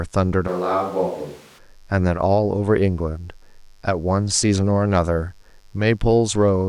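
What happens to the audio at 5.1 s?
At 5.1 s the speech sits over a mains buzz that runs through the whole clip rather than starting there. Sharp switching spikes from the supply, of the kind a dimmer, rectifier or unshielded lead lets in, arrive twice per 50 Hz cycle, so the interference carries a dense series of 50 Hz harmonics climbing into the kilohertz range. It is heard as a steady, raspy buzz, roughly 40 dB below the speech.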